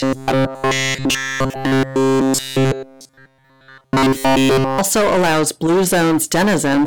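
Speech with hard clipping throughout: the signal is driven about 18 dB past what the chain can pass, so roughly a fifth of the samples have flattened peaks, giving a harsh fuzz on every loud syllable. Unlike a buzz, this distortion rises and falls with loudness and has no steady pitch. From 0.01 to 4.79 s the sound becomes a rigid, metallic robotic buzz at a fixed 133 Hz, with almost none of the original audio getting through. The likely cause is repeated short buffers of about 7.5 ms filling in for late audio. The constant pitch, regardless of level, sets it apart from the clipping.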